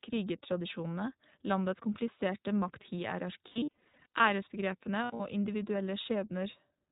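Throughout, the iLBC codec bandlimits the speech below 4 kHz and adds a plainly rough, synthetic texture, consistent with its 20 ms frame mode at around 15 kbps. From 3.48 to 4.25 s, lost iLBC frames total about 440 ms in short bursts, the longest under a tenth of a second. Each gap is bridged with a buzzy, held vowel from repeated pitch cycles. A second cluster from 5.04 to 5.22 s loses about 120 ms, with clean recovery after each burst.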